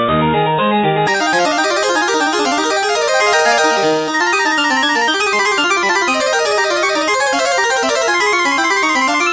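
From 1.07 s to the end, the samples are clocked out at double their intended rate with no conversion, the wrong sample rate pattern that fits 8 kHz audio played at 16 kHz. Everything runs twice as fast and sits 12 semitones, a full octave, higher.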